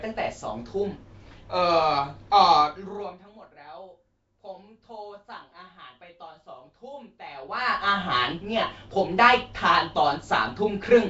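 Throughout, the speech sounds rough, hissy and smeared, likely from Nellymoser compression; a spectrogram shows blotchy, noise-filled bands and nothing above 7.7 kHz.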